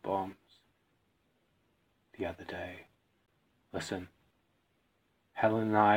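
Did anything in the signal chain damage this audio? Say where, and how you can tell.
Yes. A gap between stream segments sits at 3.26 s, at the playback stage. A hard-edged silence of about 16 ms cuts in. Two segments' time stamps left a hole, and the player filled it with silence. This fits 4-second segments. Nothing was lost.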